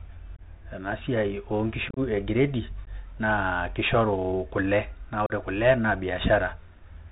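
From the start, the speech carries the sound of a Bluetooth CVSD headset codec. It is narrowband, with nothing above 4 kHz, which fits a 64 kbps CVSD link. Each sample is coded as a single up-or-down step, and the step size adapts. Loud high sounds outrun that step and distort. S sounds turn scratchy. A granular hiss sits under the speech for the whole clip.

Unconcealed Bluetooth headset packet loss comes next, at four points. Short voice packets between headset and phone went missing. Nothing filled the gaps with a guess. At 0.36 s about 22 ms drops out, a few packets' worth. At 1.89 s the losses are scattered over 75 ms, 60 ms in total, with the longest run 30 ms. This sounds chopped and crackly. At 2.85 s a 15 ms hole appears. At 5.26 s about 38 ms is lost. The holes have abrupt edges, and the speech returns briefly quieter after each one.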